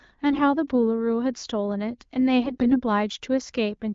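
AMR bit errors hit this speech clip at 0.31–0.40 s and again, longer and harsher, at 2.44–2.78 s. Weak-link errors, roughly 7 and 10 percent, scrambled the decoder's pulse positions and fine pitch and gain values, so the voice turns scratchy and gargly while the wideband coding around them stays clear with only light damage.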